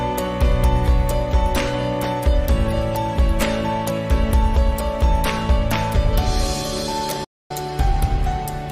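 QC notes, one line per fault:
7.24–7.51 s, digital broadcast dropout: the sound fades out over about 8 ms and stays silent for roughly 256 ms before returning. The receiver muted when frames stopped arriving or failed their checksum, which fits eight lost 32 ms frames, and that stretch of programme is gone.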